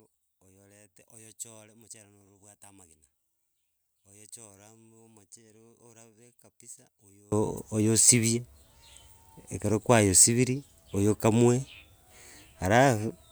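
From the start to 7.32 s the speech, heard in mono, drops by about 28 dB to a faint copy. The likely cause is one channel inverted: with one stereo side in reversed polarity, everything common to both channels cancels when they are summed. On a waveform the mono sum shrinks to a sliver until 7.32 s, then jumps back to full height. A spectrogram shows a faint trace over that stretch.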